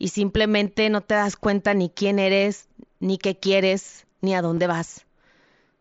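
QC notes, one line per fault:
0.65 s, concealed Bluetooth headset packet loss. One short packet of about 7.5 ms went missing on the headset link. The phone filled the gap by repeating a well-matched piece of the preceding waveform. The patch is so short that it is nearly hidden in the speech.
4.55–4.57 s, concealed Bluetooth headset packet loss. About 22.5 ms is missing, which fits three lost packets in a row. The repeated waveform runs long enough to give a brief buzzy hold, with a slight warble as real audio resumes over the mSBC link.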